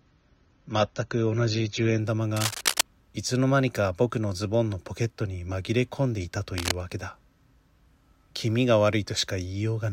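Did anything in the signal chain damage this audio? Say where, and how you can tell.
Yes. During playback, the adaptive stream started at a low bitrate. From 0.00 to 2.00 s the spectrogram shows a hard ceiling at 7.2 kHz, with smeared codec artefacts consistent with roughly 24 kbit/s AAC. The treble then fills in abruptly, with no gap.

Cable scratch noise in the analogue wiring, likely from a worn connector, appears at 2.36 to 2.81 s at about speech level and at 6.58 to 6.74 s about 5 dB quieter. It shows as dense, ragged broadband spikes in the waveform.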